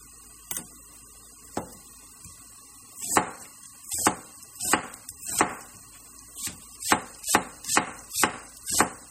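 From start to finish the sound carries a watery, swirly quality, and nothing comes through above 17.7 kHz. That's likely MP3 compression at a low rate, fitting a 32 kbps encode, where starved frames drop weak frequency lines so they flicker in and out.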